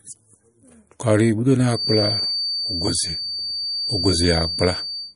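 Throughout, the speech has plainly audible watery, swirling artefacts and nothing above 10.6 kHz, likely MP3 compression at a low bitrate, consistent with about 40 kbps. From 1.66 s, right after "bù ú", a 4.6 kHz tone sits roughly 5 dB below the speech until the end: a feedback whistle, likely from a loudspeaker-to-microphone loop held just short of howling.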